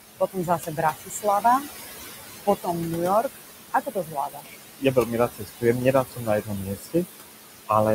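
Noise suppressor artifacts run through the whole recording. The suppressor treats whatever it judges to be steady background as noise and pulls those bands down frame by frame, by about 17 dB here. The room noise, sitting only about 10 dB below the speech, is left pumping: it drops away in the gaps and surges back beneath each phrase.

Speech cut by the noise suppressor follows from the same processing, at 0.19 to 1.25 s, 3.71 to 4.56 s, 4.79 to 5.64 s and 5.93 to 7.06 s. With noise this close to the voice, the suppressor mistakes quieter stretches of speech for background and turns them down by about 18 to 21 dB. In each span, roughly half a second of sound, a little more in the last, comes out swallowed and faint.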